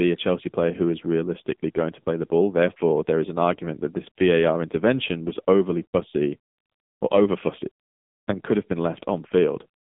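From start to finish the speech carries heavy AMR narrowband mobile codec damage. Nothing survives above about 3.8 kHz, and the line band runs roughly 200 Hz to 3.7 kHz. At 6.7 kbps the vocal-tract model sounds buzzy and synthetic. A plain low-pass filter would dull the sound without this artificial texture.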